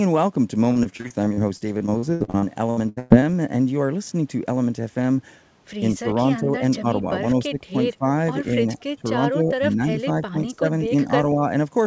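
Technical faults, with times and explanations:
0.72–3.25 s, repeated packet loss (robotic sound): roughly twenty short dropouts, the longest 115 ms, with about 29% of this span filled in. Each gap is patched by extending the preceding sound, so the speech turns choppy, with fragments missing.
5.95–7.05, 7.33–7.78, 7.98–8.06, 8.64–8.78, 9.30–10.65 and 10.86–11.42 s, speech suppressed in double talk: the talker's level dips repeatedly, from a few dB to roughly 15 dB at worst, likely because the echo canceller could not separate the talker's speech from the loudspeaker echo during overlapping speech and turned both down.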